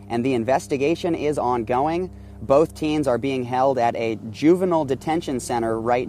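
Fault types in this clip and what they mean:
Mains hum: the 50 Hz power line leaks into the signal through a ground loop or nearby transformer, leaving a steady low drone about 20 dB below the sound throughout. On a spectrogram it shows as an unbroken horizontal line at 50 Hz, with low harmonics above it.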